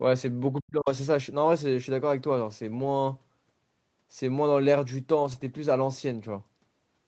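At 0.56 to 0.60 s a faint second voice leaks through, the other side's voice leaking through at roughly 40 dB below the speech. It is likely loudspeaker echo the echo canceller failed to remove. On a spectrogram it shows as a brief, weak harmonic trace.

From 0.61 to 0.88 s the talker's speech is suppressed in double talk. The level falls by as much as about 40 dB over roughly 300 ms, likely because the canceller could not separate the talker from the echo and turned both down. On the waveform the envelope visibly collapses, and the spectrogram thins to near-empty.

At 2.73 to 2.87 s, a lost packet rebuilt from error correction fills about 80 ms with lower-bitrate copies, consistent with four separate 20 ms packets. There is no gap, but the sound turns rougher and noisier. The spectrogram shows smeared, grainier harmonics rather than a blank band.

The same repair happens at 5.19 to 5.49 s, covering about 160 ms, which points to roughly eight frames. 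The coarser, noisier stretch lasts longer here. Across the band, which stops at 8 kHz for this Opus call path, the spectrogram shows blurred harmonic detail without any dropout.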